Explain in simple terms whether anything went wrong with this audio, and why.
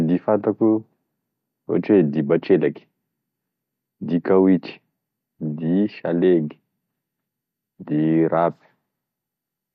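Nothing went wrong here: the speech has no technical problems in how it was captured or delivered.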